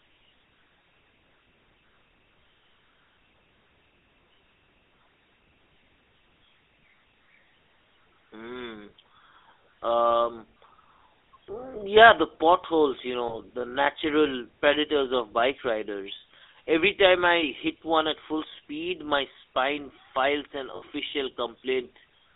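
The whole clip carries the GSM full-rate codec's buzzy, gravelly roughness. Speech is confined to roughly 300 Hz to 3.7 kHz. Lost GSM frames hit at 13.28 s, after "yeah the potholes you", and at 20.76 s, after "my spine files an". The decoder repeats stale settings, causing brief metallic rings, about 20 ms and 60 ms long.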